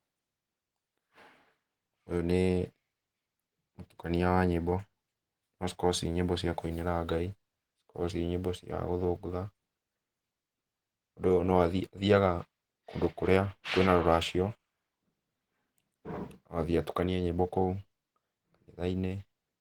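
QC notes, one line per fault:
Throughout, Opus compression: the speech sounds hoarse, with plainly audible codec damage. The bandwidth stays full, reaching about 20.1 kHz. The likely cause is Opus in its hybrid speech mode, which fits a low bitrate near 16 kbps.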